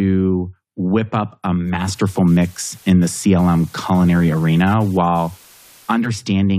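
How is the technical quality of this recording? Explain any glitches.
The recording has one clear fault. From 1.52 s to 6.27 s the speech suffers digital radio blending to analogue. A hybrid receiver lost its digital stream and cross-faded to the FM broadcast of the same station, then back. Each blend takes about half a second. On the FM side, hiss rises to roughly 30 dB below the speech, and the level shifts by about 3 dB.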